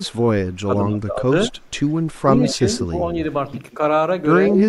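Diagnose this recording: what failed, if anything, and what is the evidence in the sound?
Echo leak in the call processing: a faint-to-loud copy trails about 170 ms behind at 0.03–0.11, 2.49–2.85 and 4.55–4.63 s, likely uncancelled loudspeaker pickup.

Speech suppressed in double talk, also call processing: the voice dips up to about 25 dB at 0.63–1.62, 2.22–3.01, 3.77–3.81 and 4.49–4.56 s, likely the canceller ducking both talkers.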